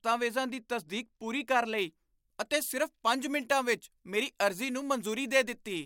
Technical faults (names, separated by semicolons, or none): pre-emphasis left on